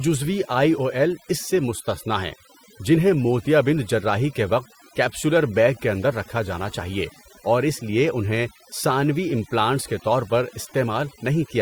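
Overdone noise removal affects the speech from start to finish. A noise reduction stage set too aggressively on a noisy source is cutting individual frequency bands down or out whenever their level sits close to its noise estimate, and the quieter parts of the voice are caught in that gating too. Between phrases the background drops and breaks up into twinkling specks.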